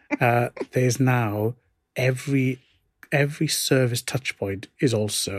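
No technical faults can be heard anywhere in the speech. There is no point in the recording that calls for a timestamp or a comment on its processing.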